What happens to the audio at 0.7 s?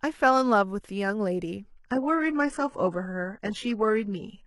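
Nothing goes wrong at 0.7 s; the speech there plays through intact, with no dropout, click or distortion.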